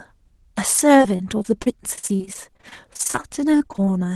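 From 0.97 to 3.93 s there's repeated packet loss, with dozens of short dropouts up to 40 ms, each patched by stretching the previous sound, so the speech turns choppy and robotic.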